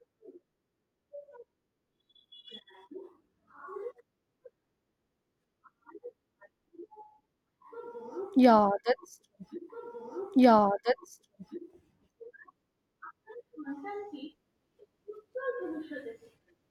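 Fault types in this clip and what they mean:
Stream segment repeated: at 11.68 s the speech jumps back and replays the roughly 2 s of programme that began at 9.69 s, because the same chunk of the stream was delivered or queued twice, adding about 2 s to the running time. A short blip marks the jump back. On a waveform the envelope from 9.69 to 11.68 s recurs identically right after it, and a spectrogram shows the same block of harmonic and formant patterns twice, split by a thin vertical discontinuity.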